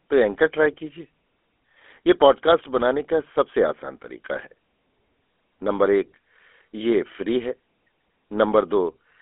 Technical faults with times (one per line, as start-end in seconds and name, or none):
0.00-9.22 GSM full-rate codec